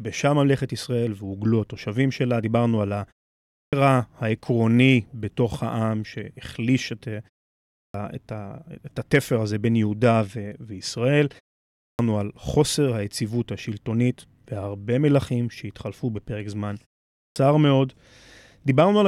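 Speech here resumes abruptly after short pauses at 3.51, 7.71, 11.78 and 17.15 s, each time missing its first 210 to 230 ms. This is clipped start after a pause: following roughly half a second of silence, the output device sleeps and needs that long to wake.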